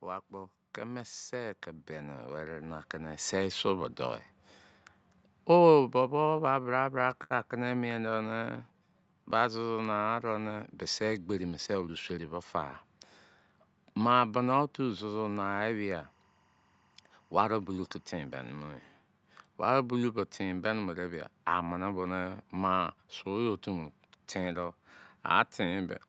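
From 0.05 to 3.68 s the level climbs by about 13 dB. This is automatic gain rising. The gain control judged the input too quiet and raised its gain step by step. Speech and background swell together across those few seconds.

From 3.78 s the opposite happens, until 10.11 s. This is automatic gain falling. The control judged the input too loud and eased its gain down by about 4 dB. The speech starts loud, then sinks slowly along with its background.

Between 6.23 and 7.32 s the speech stutters. These are repeated stalls. Packets arrived late, so the jitter buffer kept running dry. About ten times the receiver stretched the last sound to cover the wait, 166 ms in all. The longest hold was 67 ms. Nothing is lost, but the delivery drags.

From 8.01 to 9.38 s comes a jitter buffer slow-down. The buffer was low, so the receiver repeated single pitch periods to rebuild its reserve. It added 169 ms. 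The speech runs at 88% speed at the same pitch. Sounds are drawn out.

At 11.29 to 12.34 s there is a jitter buffer speed-up. Too much audio had piled up, so the receiver cut short pitch-period slices, roughly 150 ms in total. Speech runs at 114% speed at unchanged pitch and sounds hurried. A shorter one follows at 22.97 to 23.27 s. There it runs at 110%, with about 40 ms removed.

From 14.78 to 18.70 s a chirping warble sits far beneath the speech. This is timecode bleed. Linear timecode leaked in from a nearby track or cable. Its square wave flips between tones near 1 and 2 kHz. The pattern fits code running at 23.976 frames per second. Throughout, the Opus call path limits the top end to 8 kHz.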